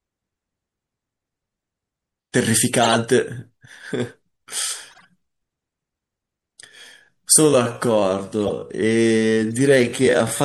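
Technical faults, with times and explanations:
Throughout: MP3 compression. The speech sounds watery and swirly, with dull treble and smeared consonant attacks. The encoder starved quiet frequency lines of bits, so they flicker on and off between frames. The damage is plainly audible and fits a 64 kbps encode, the likely cause.
2.82–2.95 s, 4.91–5.05 s, 8.41–8.50 s and 9.55 s: corrupt frame decoded. Each is a short chirp or burst of noise across a few frames. Damaged data made the decoder put energy at the wrong frequencies. The first is loud, at about -5 dBFS. The second is faint, and the last two fall in between.
7.45 s to the end: time-stretched section. The pace abruptly drops to about 0.63 times normal while the pitch stays the same. Short pieces are repeated to fill the time, so the slowed speech drags. Fitting the audio to a longer length is the likely cause.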